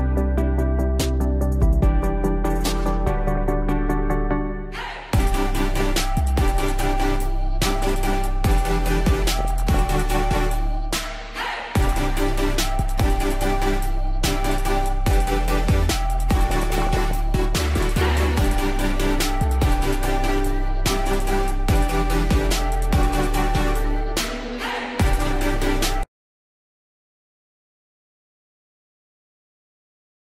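From the start and throughout, the sound is dull and plainly gurgling, with a granular roughness in what remains: MP2 compression, likely at around 80 kbps. Layer II divides the spectrum into 32 sub-bands and rations bits among them; at this rate the upper bands drop out and flicker back while the rest are coarsely quantised. A spectrogram shows a ragged, blocky ceiling on the high frequencies, with patches switching on and off.

DAB burbling breaks in six times: 3.35–3.63 s, 5.65–6.00 s, 7.70–7.83 s, 9.37–9.79 s, 11.85–11.98 s and 16.50–17.11 s, the last being the longest. Bit errors, at a rate of a few tenths of a percent, slip past error correction into the MP2 stream, corrupting samples and scale factors so individual sub-bands leap in level for up to a frame. It puts short blips of noise into single sub-bands. On a spectrogram these bursts appear as isolated bright horizontal blocks, and the waveform shows brief irregular level jumps.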